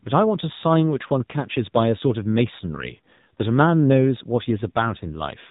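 Throughout, the speech carries the AMR narrowband mobile codec at 7.4 kbps. Nothing passes above 4 kHz, and the low bitrate makes the voice plainly buzzy and synthetic. From 4.68 to 4.72 s, AMR bit errors corrupt roughly one in ten of the weakly protected bits, which fits about two 20 ms frames. The misplaced excitation pulses and skewed gain and spectrum values make the sound briefly hoarse and gargly.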